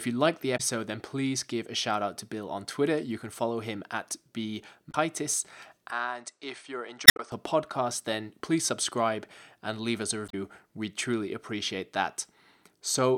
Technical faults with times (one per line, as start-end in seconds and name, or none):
0.54-0.60 damaged data in a compressed stream
4.88-4.95 damaged data in a compressed stream
5.90-7.32 input switched to a poorer device
7.04-7.19 damaged data in a compressed stream
10.25-10.34 damaged data in a compressed stream